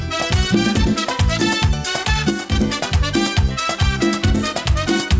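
At 2.30 s the level drops abruptly by about 6 dB, with the background falling together with the sound, then jumps back at 2.52 s. This sudden gain jump is likely a digital gain change applied between adjacent samples without a ramp. Throughout, nothing sits above 8 kHz, consistent with a G.722 call codec.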